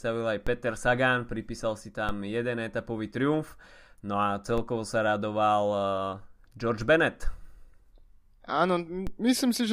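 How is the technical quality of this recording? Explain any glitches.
The speech is marred by four DC steps, at 0.47, 2.09 (just before "jeden etapový triumf"), 4.58 and 9.07 s. Each time the waveform's zero line jumps by about -22 dBFS and then drifts back, as a 5 Hz high-pass would make it decay. Each jump is heard as a low thump under the speech. On the waveform it shows as a sudden baseline shift that slowly relaxes, and on a spectrogram as a brief broadband vertical line with energy at the very bottom.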